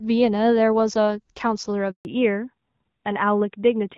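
At 1.91 s the speech cuts out for about 140 ms, ending at 2.05 s. This is a handover gap: while the call switched networks, no speech frames arrived, so the sound dies away almost at once and stays silent until the new link delivers audio.

From 2.05 s to the end, a fallback to narrowband follows the handover. The call leaves the HD Voice codec, whose light coding texture before the gap fits AMR-WB at around 12.65 kbit/s, for an older narrowband codec consistent with AMR-NB at 12.2 kbit/s. Nothing above 4 kHz survives, so the speech turns duller and rougher.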